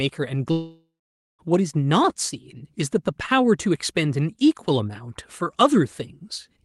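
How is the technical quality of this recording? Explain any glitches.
The recording has one clear glitch near the start, and the top end stops around 12 kHz, consistent with a call codec.

From 0.51 to 1.41 s the sound smears into a fading buzz, then goes nearly silent for about half a second. This is likely a long network dropout, with lost audio concealed and then skipped.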